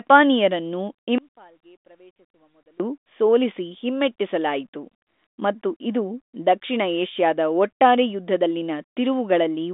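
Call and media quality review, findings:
Audio dropout to a faint residue, 1.18 to 2.80 s: speech lost for 1.6 s, faint sound about 30 dB down remains. Path stayed live; likely upstream signal loss, abrupt cut and return.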